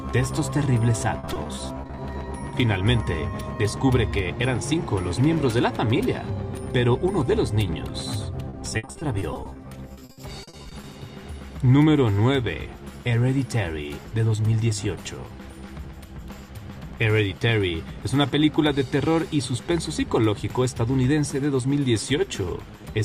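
From 1.19 to 1.99 s and again from 8.49 to 10.85 s, packets were repeatedly lost or arrived too late, and the receiver covered each hole by stretching the last sound it had. This is repeated packet loss, heard as a robotic sound. The first stretch has around a dozen brief dropouts of up to 40 ms. The second has about two dozen, up to 60 ms. Each time, close to 30% of the stretch is patched, leaving the sound choppy with pieces missing.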